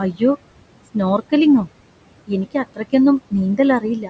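Noise suppressor artifacts run through the whole recording. The room noise, sitting about 16 dB below the speech, is pulled down by about 21 dB wherever the suppressor classifies it as steady background. Because that gain is recalculated frame by frame, the residue sinks in the pauses and comes back up beneath the speech. The call microphone processing limits the audio to nothing above 8 kHz.

From 4.0 s to about 4.1 s, right at the end, comes speech cut by the noise suppressor. Over roughly a tenth of a second the suppressor mistakes the tail of the speech for noise and lowers it along with the background, by about 8 dB at the deepest point. That closing sound comes out swallowed and faint rather than fading naturally.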